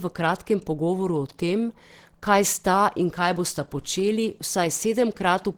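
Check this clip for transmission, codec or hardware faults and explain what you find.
One fault runs through the whole clip. Throughout, the speech was likely squeezed through Opus compression in hybrid mode at a starved rate, fitting about 16 kbps, leaving it plainly muffled and hoarse.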